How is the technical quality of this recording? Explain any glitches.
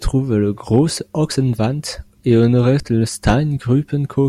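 The recording has two audible problems: clipped peaks and skips in the speech.

Hard clipping occurs at 0.74 to 0.79 s and 2.31 to 2.70 s, overdriven by about 1 dB, and at 3.27 to 3.34 s by about 6 dB. Peaks exceed the available range and are cut flat. This adds crackle, which is harsher in the last passage.

At 1.32 s and 2.80 s, there is a jump forward. Around 40 ms of audio vanishes each time. The likely cause is a dropped buffer (overrun), where unread samples were overwritten.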